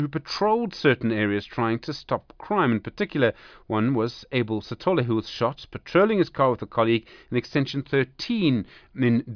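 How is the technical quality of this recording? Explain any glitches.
The technical quality of this recording is sound, with no glitches to explain.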